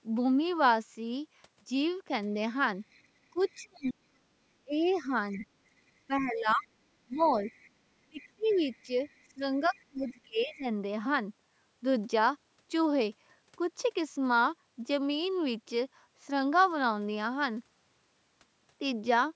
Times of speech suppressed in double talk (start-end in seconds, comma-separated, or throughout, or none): 3.31-5.44, 6.07-7.45, 8.04-10.65